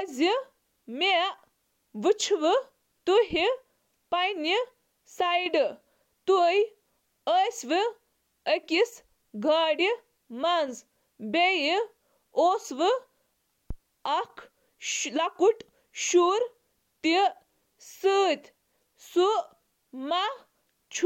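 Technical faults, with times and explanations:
13.70–13.77 s, phantom power thump: supply switched on or off on the live input steps through the coupling capacitors, giving a deep thump peaking about -21 dBFS and decaying in 15 ms.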